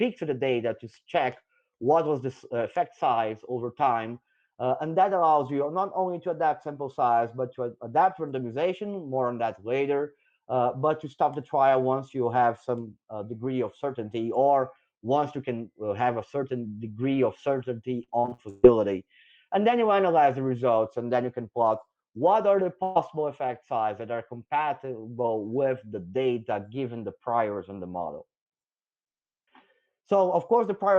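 From 18.03 to 18.65 s there's repeated packet loss giving a robotic sound: six gaps, the longest 133 ms, patched by stretching the last sound, so about half that stretch comes out choppy. At 22.83 s a burst of packet loss drops about 120 ms, filled with a fading held tail of the previous sound before the audio jumps ahead.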